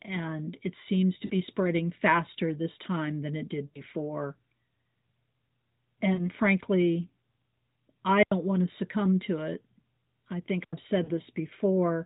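Speech carried over a narrowband AMR mobile link (the 4 kHz ceiling and slight buzz are typical of that path), and it has two kinds of fault. Lost AMR speech frames show up at 1.26 s (between "and it seems to" and "spreading faster this time"), 3.66 s (right after "this time than it"), 6.14 s and 11.04 s. Each time the decoder hit corrupted frames and filled the gap by repeating its last good pitch and vocal tract settings at falling gain. The short ones sound like a quick dip or warble about 40 ms long, which fits two dropped 20 ms frames. The one at 3.66 s runs about 80 ms, so the voice smears and fades before it comes back a bit rough. Separately, there are two wireless microphone squelch dropouts, at 8.19 s (just before "want to succumb to") and 10.61 s. In each, the FM radio signal faded far enough that the receiver's squelch cut the output. You hear a short swell of hiss, then about 87 ms of near silence, then the voice returns.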